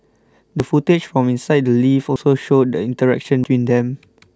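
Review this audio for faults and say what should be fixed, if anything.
A sudden jump forward in the speech occurs at 0.6 s and 2.16 s, each skipping about 40 ms, and at 3.44 s, where roughly a tenth of a second vanishes. These are likely dropped buffers (overrun): samples were overwritten before being read, splicing the edges together. Raise the capture buffer size or give the recording thread higher priority so it always drains the buffer in time.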